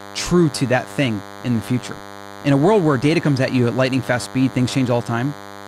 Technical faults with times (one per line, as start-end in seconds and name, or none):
0.00-5.67 DECT cordless phone buzz